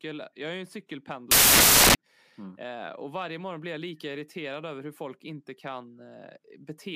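A speech clip with one stretch of samples built from the wrong bytes, from 1.31 s to 1.95 s. For that span the reader assembles each sample incorrectly, whether shifted by a byte, byte-swapped or misaligned, so the rapidly fluctuating low-order bits land in the most significant position. The result is a burst of loud, harsh broadband noise replacing the speech.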